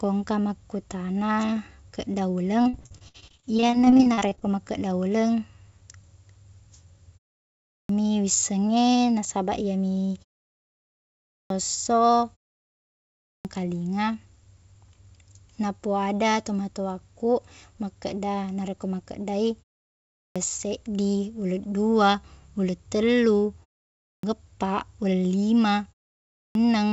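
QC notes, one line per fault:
2.62–4.43 s, repeated packet loss (robotic sound): Over this 1.8 s stretch the incoming stream kept dropping or delaying packets, leaving about two dozen holes. The longest hole is 57 ms. The receiver patched each one by extending the sound it had just played, covering 610 ms in total, or about a third of the span, while 640 ms never arrived. With holes this close together, the speech comes out choppy. Syllables are smeared by the stretched fill, and other pieces are simply gone.
7.60, 11.18, 13.11, 20.06, 23.94 and 26.26 s, clipped start after a pause: Each of these follows a silence of 0.37 to 1.02 s, long enough for the playback device to idle. It then needs time to wake and lock again before it outputs sound, so the first 290 to 340 ms of the next phrase is swallowed. Speech therefore starts abruptly, missing its opening sounds. This happens before "wisseng e nasabaq iyemi" at 7.60 s, before "seddi uleng dua uleng" at 20.06 s, and just after "uleng dua uleng tellu" at 23.94 s. 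The speech has no content above 8 kHz, consistent with a G.722 call codec at 64 kbps.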